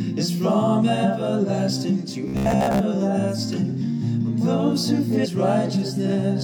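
From 2.28 to 2.81 s the audio turns into a rigid, metallic robotic buzz pinned at about 67 Hz. That matches a 15 ms slice being replayed over and over, most likely from repeated short buffers while late audio is skipped. Unlike a plain dropout or stutter, the sound never goes silent but keeps a fixed mechanical pitch. At 5.21 to 5.26 s there is a brief blip and the sound jumps ahead. This is most likely a stream segment skipped by the player. Unlike a dropout, no gap of silence is left behind, and the material simply resumes from a later point.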